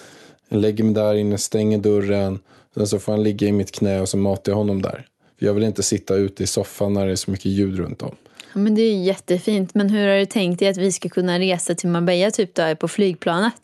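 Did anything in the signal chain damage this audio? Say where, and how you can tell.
No, nothing in the chain has damaged this speech; it has come through a call link whose codec tops out at about 12 kHz, and that is simply how such a link normally sounds.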